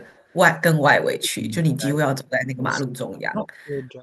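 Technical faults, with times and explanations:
0.02–0.33 s and 2.72–2.77 s, echo leak: A delayed copy of the speech returns 364 ms after the original. It is very faint in the first stretch, about 35 dB down, and louder in the brief second one, about 20 dB down. The likely cause is a far-end echo canceller letting loudspeaker pickup through.
0.89–2.03 s, 2.26–2.82 s, 3.17–3.47 s and 3.63–3.98 s, speech suppressed in double talk: The speech dips sharply in pieces, by about 25 to 40 dB at its deepest. The likely cause is an echo canceller that cannot tell this talker from echo while both sides talk, so it turns both down.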